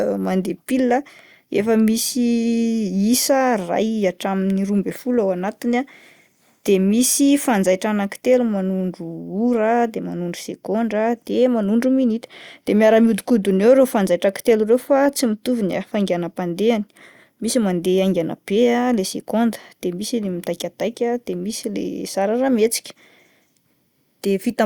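No technical faults can be heard anywhere in the recording, which stays steady and intact for its entire duration.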